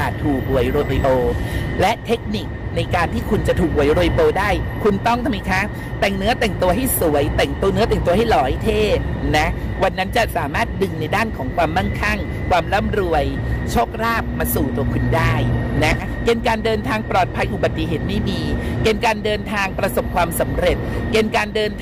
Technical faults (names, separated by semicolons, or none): hard clipping; frames out of order